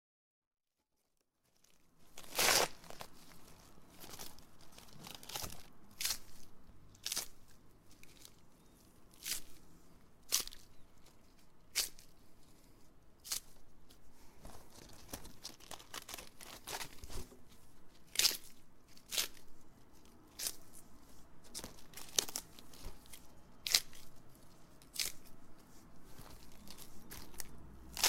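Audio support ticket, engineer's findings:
No faults found: the level rises in a smooth fade-in from the very beginning to about 2.33 s with no click or hard edge, and nothing else in the signal points to a defect in any component.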